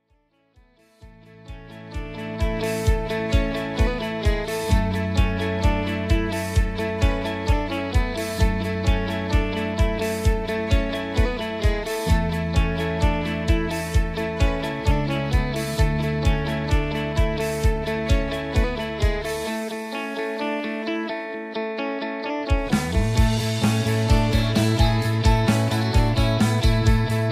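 No technical faults are audible.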